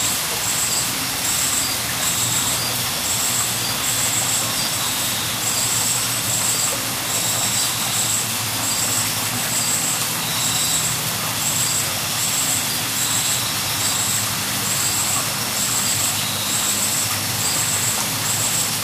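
No technical faults can be heard anywhere in the recording, and the signal holds steady throughout.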